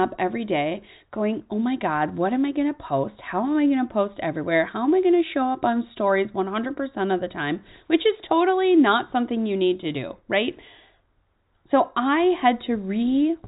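No technical faults are audible.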